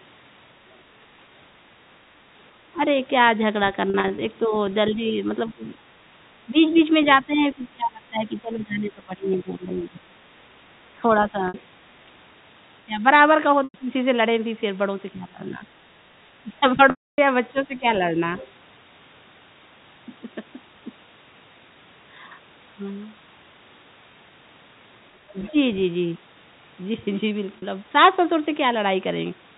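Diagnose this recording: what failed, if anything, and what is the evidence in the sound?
Call processing: the talker's level dips at 2.74 s, through 4.46–13.89 s, 15.13–17.85 s and at 25.32–25.55 s, by about 10 to 20 dB. The likely cause is speech suppressed in double talk, with the echo canceller turning down the talker along with the loudspeaker echo.

Network: packet loss with pitch repetition produces held, buzzy fills at 3.90–4.18 s and 27.58–27.62 s. Losses of 60 ms at 11.48–11.54 s, 100 ms at 13.64–13.74 s and 280 ms at 16.90–17.18 s fade to silence as the concealment runs out.

Call processing: faint scraps of the other side's voice leak through at 6.76–6.80 s, 18.36–18.49 s and 25.40–25.50 s, about 20 to 25 dB under the talker. The likely cause is residual loudspeaker echo that the canceller missed.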